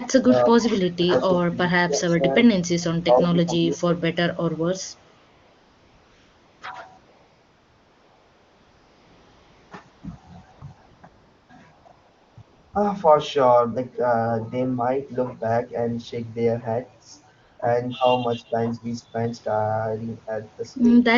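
From 0.0 to 2.52 s, and again at 3.06 to 4.0 s and 4.51 to 4.66 s, the speech dips and breaks up in pieces, by up to about 25 dB. This is speech suppressed in double talk: the echo canceller, likely confused by far-end speech over the talker, turned both down. Between 5.17 and 12.73 s, pauses fill with a smooth, steady hiss that switches in and out, ten times in total, running from 20 ms up to 2.7 s around 6.97 to 9.71 s. This is AMR comfort noise: the phone stopped sending speech frames and the receiver substituted synthetic noise. A slight 5 dB dip at 15.67 to 15.71 s is another double-talk suppression. A final comfort-noise patch appears at 17.41 to 17.59 s, and the speech ducks again at 17.97 to 18.05 s and 18.35 to 18.55 s.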